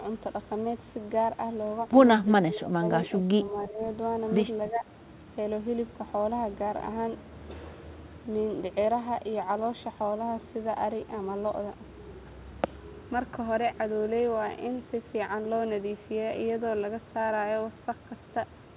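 Around 2.42 to 2.82 s the speech dips hard, roughly 20 dB at worst, then softer dips of about 10 dB follow at 3.08 to 3.8 s and 4.7 to 4.86 s. That's likely speech suppressed in double talk, with the echo canceller ducking the talker while the far side spoke.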